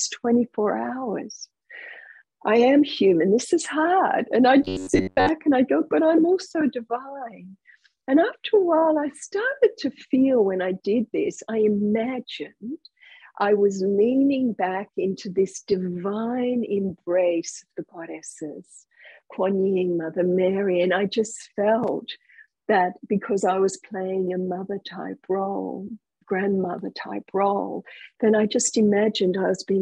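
From 4.63 to 5.29 s the sound takes on a rigid, metallic buzz at about 93.8 Hz. This robotic sound from repeated short buffers is likely caused by a segment of roughly 10.7 ms being replayed for most of that stretch, while the incoming audio is skipped.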